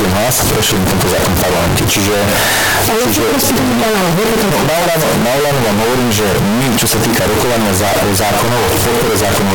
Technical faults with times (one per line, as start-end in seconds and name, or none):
0.00-9.54 float read as integer